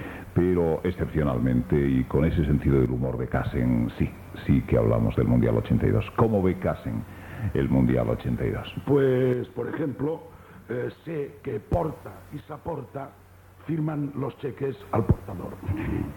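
At 2.86 to 3.33 s, 9.33 to 11.73 s and 12.40 to 14.80 s the level sinks by about 6 dB abruptly, likely one channel dropping out before the mono sum.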